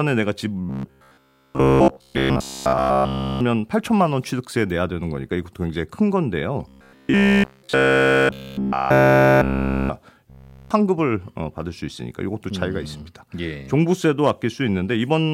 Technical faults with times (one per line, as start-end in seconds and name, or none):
0.69-3.41 robotic sound from repeated short buffers
6.69-9.89 robotic sound from repeated short buffers
10.30-10.71 robotic sound from repeated short buffers